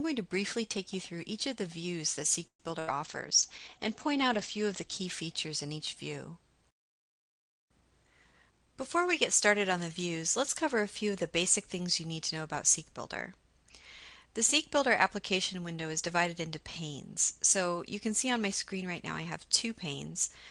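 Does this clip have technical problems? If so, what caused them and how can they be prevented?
Yes. At 2.47 to 2.63 s the sound is stretched into a fading tail that ends in about 100 ms of silence, then picks up exactly where it stopped, with nothing lost. This is likely a call audio freeze: delayed packets left the jitter buffer empty, so the receiver continued the last sound. A larger or adaptive jitter buffer and a more stable network path would prevent it.

At 2.80 to 2.90 s the sound holds briefly as a fading continuation and then jumps ahead, skipping about 80 ms. This is a burst of packet loss, where consecutive packets were lost and concealed. Forward error correction or redundancy in the codec would prevent it.

From 3.04 to 6.45 s the audio turns muffled and coarse, worst for about 1.6 s. This is a call bitrate drop from 32 to 11 kbps, which cut the audio bandwidth from 20 kHz to 8 kHz. 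More reliable upstream bandwidth, or less competing traffic, would prevent it.

From 8.04 to 8.67 s the audio rushes at about 117% speed with unchanged pitch. This is a jitter buffer speed-up, where the receiver trimmed pitch-period pieces, roughly a tenth of a second in total, to shed excess delay. Smoother packet delivery that avoids bunched arrivals would prevent it.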